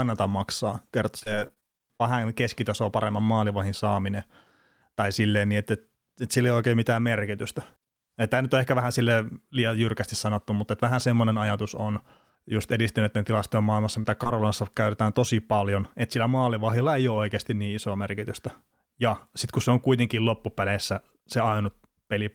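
From 1.19 to 2.02 s, between "maksaa kertoo" and "keskitasoa paremman maalivahin saaminen", repeated packet loss produces robotic, choppy speech. Eleven gaps of up to 28 ms each are patched, so about a quarter of the stretch is concealed. Short concealed packet loss follows at 14.02–14.06 s, after "just edistyneiden tilastojen maailmassa", and again at 14.24–14.27 s, before "käytetään tosi paljon että". Each is an isolated 20 ms hole filled by extending the preceding sound, heard as a brief smear rather than a sustained mechanical texture.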